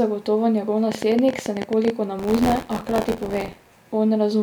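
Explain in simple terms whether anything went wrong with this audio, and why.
From 0.92 to 1.91 s, a quick, uneven ticking of about fifteen sharp pops sits over the speech, roughly sixteen a second. This is a train of clicks, likely from electrical interference or a faulty connection or power supply adding brief pulses.

From 2.18 to 3.79 s, the voice takes on a robotic, buzzy rattle at about 86 Hz. This is buffer tearing: the software and hardware fell out of step, so a small slice of each buffer replays audio from roughly 40 ms earlier, and the buzz rate fits a 512-sample buffer.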